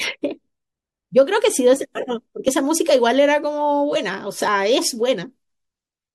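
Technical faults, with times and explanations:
2.48 s, overlap between stream segments: a tiny skip in the speech where two segments' timestamps overlapped and the player trimmed roughly 15 ms of sound that wasn't actually duplicated. The waveform jumps across the gap, which is why you hear a quick skip.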